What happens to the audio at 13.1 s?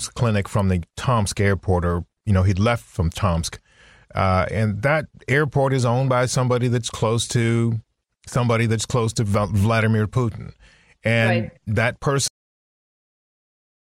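At 13.1 s there's nothing there at all: the clip has a cut-off end. The speech stops abruptly at 12.28 s, right in the middle of a sound, and from there to 13.92 s it's pure digital silence. What happened is that the final stretch of audio buffers never got written or played out, so instead of the sound trailing off naturally it just vanishes, with no decay whatsoever.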